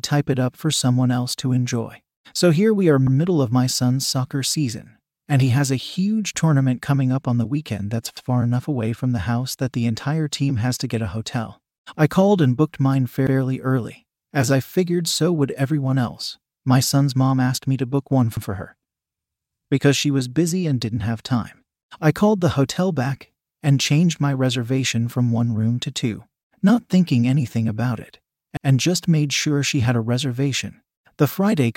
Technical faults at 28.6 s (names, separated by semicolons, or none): overlapping chunks